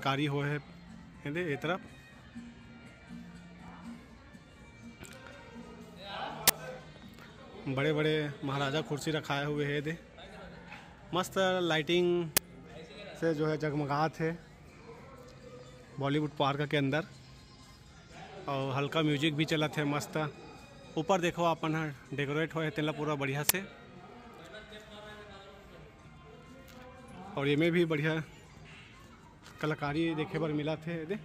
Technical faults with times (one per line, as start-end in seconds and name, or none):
6.48 uninitialised buffer
12.37 uninitialised buffer
23.49 uninitialised buffer